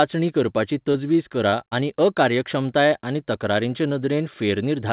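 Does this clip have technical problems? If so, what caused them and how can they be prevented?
Yes. Short concealed packet loss occurs at 0.92–0.96 s, 1.50–1.54 s and 1.68–1.73 s, within call audio that stops at 4 kHz. Each time, a few hundredths of a second of speech arrived too late to decode. The receiver bridged the gap by extending the preceding sound and blending back, leaving a brief smear or wobble. A steadier network connection, a deeper jitter buffer or forward error correction would prevent these gaps.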